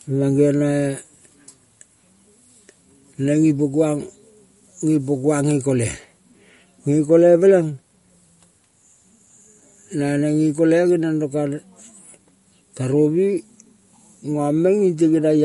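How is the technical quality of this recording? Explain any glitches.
The quality is compromised by plainly audible codec damage across the whole recording.

MP3 compression, throughout: the speech has nothing above 11.2 kHz and a watery, swirling texture, likely from an encoder short of bits cutting the treble and dropping weak frequency components frame by frame, which fits a low bitrate around 48 kbps.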